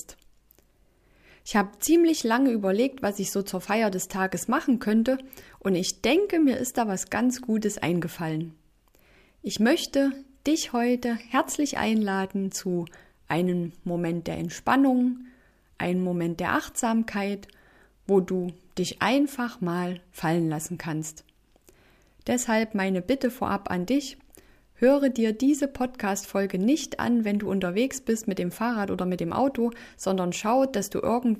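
Nothing wrong turns up anywhere in the audio, so there isn't a single glitch or dropout to flag along the way.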